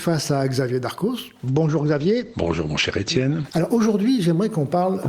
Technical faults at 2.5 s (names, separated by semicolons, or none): call bitrate drop